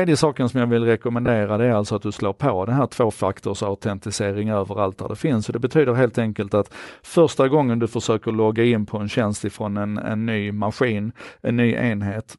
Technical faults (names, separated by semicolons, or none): Bluetooth LC3 compression; lost LE Audio frames